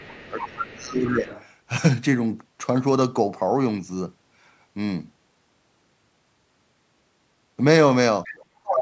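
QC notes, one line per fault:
0.0–0.67 s, 1.06–1.46 s and 8.24–8.45 s, other side's voice leaking through: a second, fainter voice sits under the talker, around 15 dB down in the first stretch, near 25 dB down in the second and about 20 dB down near the end. This is likely residual loudspeaker echo that the echo canceller failed to subtract from the microphone signal, so the far end's playback re-enters the send path.
0.3–1.27 s and 8.6–8.82 s, speech suppressed in double talk: the talker's level collapses in pieces, by roughly 20 dB across about a second at the start and by as much as 35 dB in the final fifth of a second. Both sides are likely active at once, so the echo canceller's suppressor cannot separate near speech from echo and attenuates everything, including the talker's band-limited signal, which reaches up to 8 kHz.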